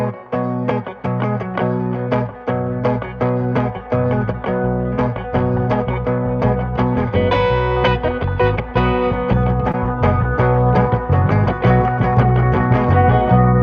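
At 9.71 to 9.75 s there is a short stall from a late packet: the jitter buffer ran dry and the receiver held the last sound for about 24 ms, then resumed where it left off. Unlike packet loss, nothing is skipped. The sound is briefly stretched with a faint buzz or dip, and everything after it lands about 24 ms late. Throughout, the call codec's band limit is audible as a top end that stops at about 8 kHz.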